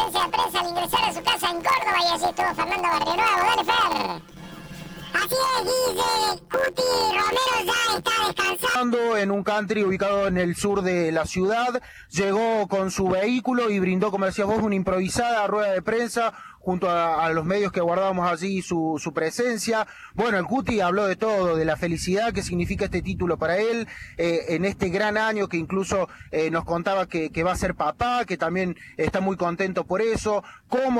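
From 0.0 to 8.76 s, planar audio read as interleaved: each block's run of left samples followed by right samples is taken as alternating pairs, so each 11.61 ms block plays twice at double speed. Blocks this short, fitting 512 samples, yield a robotic buzz at 86.1 Hz without a clear octave shift.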